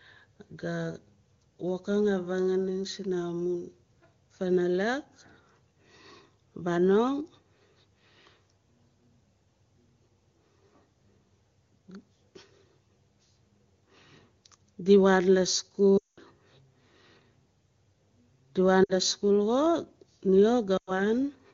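Lost AMR speech frames at 15.97 to 16.19 s, 18.84 to 18.92 s and 20.77 to 21.01 s: failed frames were concealed by repeating the last pitch and vocal tract settings at falling gain, so the speech briefly smears and fades before returning weak or rough.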